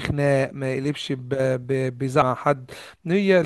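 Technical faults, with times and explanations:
2.21 s, stream segment skipped: the speech lurches forward with a brief blip, and the flow of the sentence breaks as if a stretch of talk has been cut out and the two sides butted together. The discontinuity itself passes in about 14 ms. The likely cause is a segmented stream in which one chunk failed to arrive, so the player dropped it and carried on from the next segment. That leaves a gap in the content and a small click at the splice.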